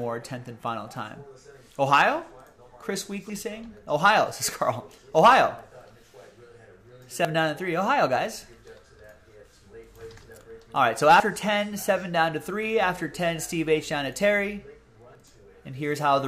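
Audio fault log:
3.30, 7.25, 11.2 and 15.15 s: audio missing between chunks. At each of these points the sound jumps forward, dropping roughly 50 ms, and the two sides butt straight together with no gap of silence, so you hear a quick skip. They land on an even beat about every 4 s, which points to the recorder likely handling the audio in 4-second chunks and losing a sliver each time it hands off from one chunk to the next.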